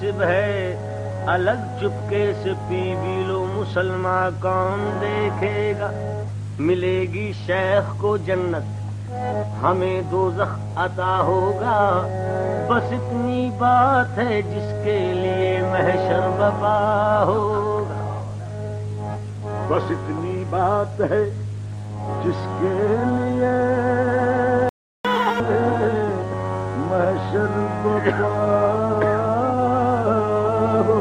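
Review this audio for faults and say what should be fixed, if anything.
There's a playback stall from 24.69 to 25.05 s: about 355 ms of silence mid-flow, most likely the player running dry or its thread getting blocked.

Right after, from 25.05 to 25.40 s, there's catch-up at higher speed: the backlog plays at 2x, pitch jumps up close to an octave, then settles back.

To fix it, give the player a deeper buffer and keep its thread unblocked, and have it drop or smoothly stretch late audio instead of doubling the speed.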